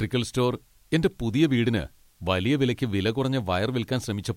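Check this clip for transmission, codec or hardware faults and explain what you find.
There is one fault, present throughout the speech: low bit depth with dither. Rounding to about 10 bits after dithering turns the quantisation error into steady white noise, a constant even hiss roughly 40 dB below the speech, with no distortion.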